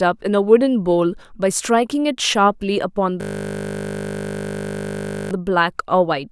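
At 3.21 s the speech stops and a system hang loop takes over until 5.31 s. The driver or system froze while the audio hardware kept replaying its ring buffer, so a single 20 ms slice repeats exactly, roughly a hundred times, which fits a 20 ms buffer. At that length the repetition fuses into a steady 50 Hz buzz. Unlike packet-loss concealment, which fades or varies, every cycle here is identical and never decays.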